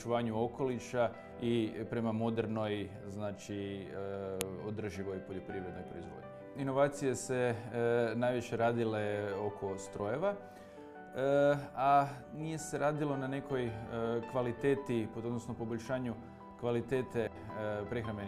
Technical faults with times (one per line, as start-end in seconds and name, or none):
4.41 file header played as audio